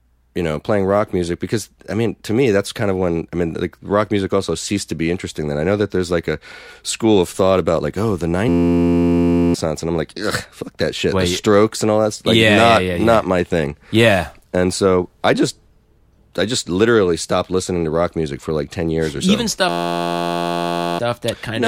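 At 8.49 s, after "about like oh the", a system hang loop holds until 9.54 s, where "and I'm like" resumes. It recurs from 19.69 to 20.99 s. One 11.61 ms slice, which fits a 512-sample buffer, repeats exactly at 86.1 Hz. That makes a steady pitched buzz rather than a dropout's silence or a glitch's irregular stutter. Roughly one second and one and a half seconds of speech are lost.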